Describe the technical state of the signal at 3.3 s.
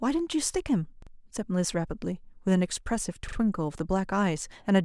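A brief stutter runs from 3.29 to 3.37 s, where the same short slice of speech sounds three times in a row with a hard join at each restart. This is a repeated buffer. Fresh audio arrived late, so the device played its last buffer twice more. Each repeat lasts about 43 ms, which fits a 1024-sample buffer, and essentially no audio is lost.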